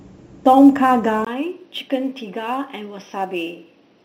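A speech recording with sample clock jitter throughout: a fine roughness tracks loud, bright passages, consistent with a few microseconds of timing error sitting roughly 35 dB below the signal. At 1.25 s, after a 20 ms silence, the sound turns dull and about 5 dB quieter with nothing above 6 kHz and a new noise floor roughly 45 dB down, likely an input switched to a poorer device.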